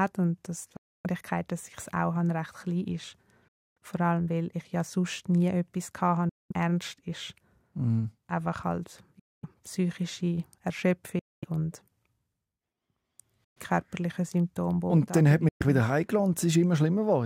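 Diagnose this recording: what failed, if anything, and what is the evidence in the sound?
Bluetooth dropout: hard-edged silences at 0.76, 3.48, 6.29 (after "ja sonst nie etwas"), 9.19, 11.19, 13.44 and 15.49 s, lasting 0.12 to 0.28 s. Speech resumes as if it played on underneath, likely packets lost on the wireless playback link.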